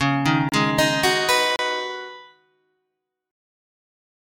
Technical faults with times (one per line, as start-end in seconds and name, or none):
0.00-4.25 noise suppressor applied to music or sounds
0.49-0.52 block of digital silence
1.56-1.59 block of digital silence
2.05-2.75 sound cut by the noise suppressor